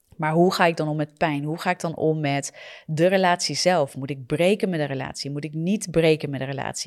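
Sharp single clicks sound at 0.54, 3.66, 4.62 and 6.15 s, likely dropped samples: a fraction of a millisecond missing, making the waveform jump abruptly.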